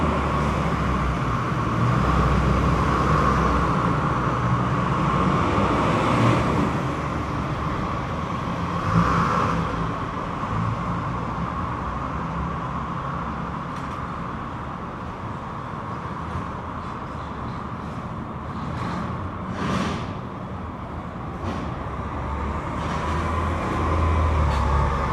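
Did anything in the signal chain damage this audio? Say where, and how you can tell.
No, nothing in this recording of sounds stood out as damage from any stage of the signal chain on listening.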